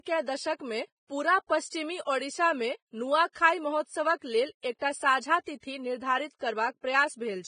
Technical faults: Vorbis compression; pre-echo

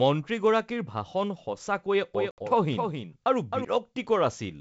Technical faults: doubled audio track; packet loss on an ADPCM call

